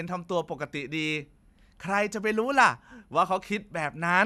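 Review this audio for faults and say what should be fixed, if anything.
Nothing here needs fixing; I listened through and didn't hear a single technical fault in this speech.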